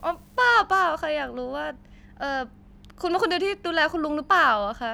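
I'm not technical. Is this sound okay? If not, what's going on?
No, not quite. For the first half-second, from 0 to about 0.55 s, there's a faint fizzy crackle over the speech. That's an unreliable data bit: one bit comes out wrong in a random share of the samples, and every slip makes a tiny, same-sized click.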